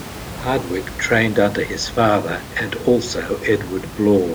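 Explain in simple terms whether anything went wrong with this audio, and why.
Nothing went wrong here.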